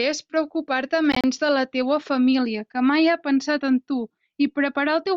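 From 1.12 to 1.24 s, the speech breaks up with short gaps. About 58 ms of sound is missing across that span, the longest gap 29 ms, and it resumes as if it had played on. This is likely a Bluetooth dropout, with packets arriving too late and being dropped.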